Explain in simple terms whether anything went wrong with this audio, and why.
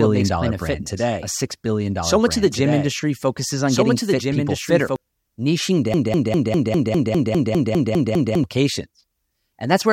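From the very start until about 4.96 s, the speech plays twice, with a slightly quieter copy trailing about one and a half seconds behind. This doubled audio track likely comes from the sound being captured a second time through a slower route.

From 5.94 s to 8.44 s, a tiny fragment about 0.2 s long repeats 12 times back to back, like a stuck record. This broken-record loop likely means playback stalled and kept resending its last piece, so the speech meant for that stretch is gone.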